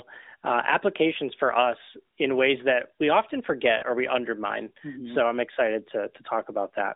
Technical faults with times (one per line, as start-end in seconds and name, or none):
0.30-0.35 lost AMR speech frames
3.78-3.84 lost AMR speech frames